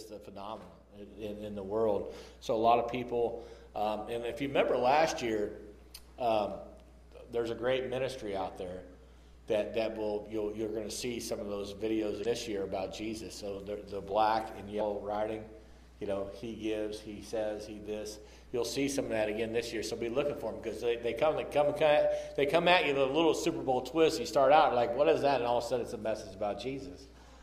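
At 12.21 to 12.27 s, damaged data in the compressed stream produces a brief glitch lasting about 50 ms. Corrupt bytes made the decoder misread those frames and lose sync until the next valid header.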